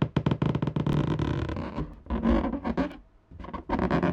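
Everyday sound with overlap between stream segments: tiny skips at 0.93, 1.94 and 2.92 s, about once per second, where a few milliseconds were dropped, showing as waveform jumps and thin vertical spectrogram lines.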